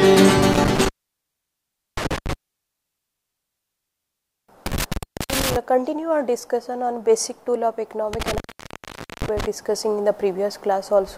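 Intermittent contact hits three times: 0.53 to 2.33 s, 4.66 to 5.56 s, and 8.13 to 9.46 s. A loose plug or cable briefly opens, dropping the audio for about 1.09 s, 0.38 s and 0.84 s, with crackle around each gap and faint hiss underneath.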